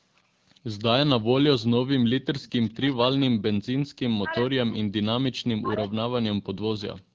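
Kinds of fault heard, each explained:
Echo leak: Short, faint scraps of the speech return about 0.4 s after the original, at 2.42–2.51 s, 2.91–2.95 s and 5.84–5.89 s, sitting roughly 25 to 30 dB below the main talker. The likely cause is a far end listening on a loudspeaker whose echo canceller let some of its microphone pickup through, so a delayed, low-level copy was sent back down the line in these brief fragments.
Speech suppressed in double talk: The talker's level dips sharply, by around 40 dB at its deepest, across three stretches: 2.51–3.83 s, 4.04–5.24 s, and from 5.57 s to the end. Within each stretch the speech fades or drops out in pieces for about a second or more in total. This is likely an echo canceller meeting simultaneous speech from both ends, failing to separate the local talker from loudspeaker echo, and attenuating both.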